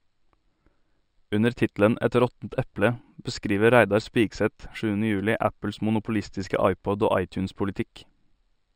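Throughout, the speech shows imaging from linear upsampling: a dulled top end with faint mirrored images at 6 to 12 kHz, roughly 30 dB down, giving sibilants a metallic shimmer, consistent with straight-line interpolation from 12 kHz to 48 kHz.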